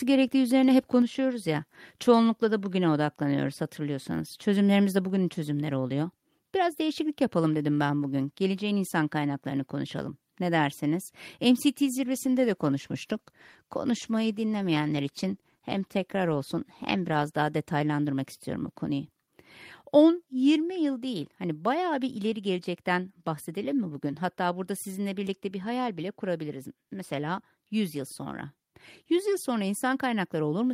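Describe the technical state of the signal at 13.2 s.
At 13.2 s the signal is inside a call bitrate drop that runs from 11.76 s to about 18.15 s, starting just before "istiyorum bu konuyu". The bandwidth estimate fell and the encoder was pushed from 32 kbps down to 16 kbps, staying at its lowest for about 5.3 s. With half the bits, Opus quantises the spectrum more coarsely and trims upper-band detail, so the speech here sounds rougher, watery and duller than before 11.76 s.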